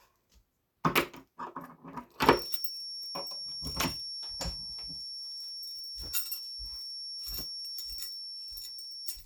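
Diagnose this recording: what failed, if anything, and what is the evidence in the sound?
A feedback whistle runs from 2.18 s to the end: a thin, steady 5.5 kHz tone a few decibels under the sound, swelling and fading slowly in level. A spectrogram shows one unbroken horizontal line. The likely cause is a loudspeaker-to-microphone acoustic loop held just short of runaway.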